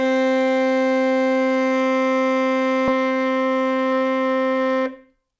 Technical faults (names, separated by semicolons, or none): skip ahead; jitter buffer speed-up